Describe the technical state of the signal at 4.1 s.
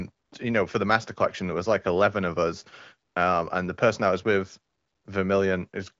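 At 4.1 s the speech is intact, with no fault, and only the band-limited wideband sound of the AMR-WB (HD Voice) coding is heard.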